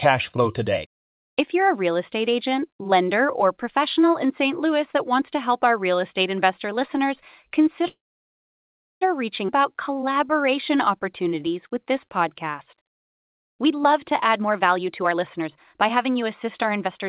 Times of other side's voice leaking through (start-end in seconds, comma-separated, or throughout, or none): none